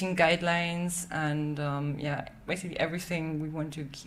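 No technical faults can be heard anywhere in the audio.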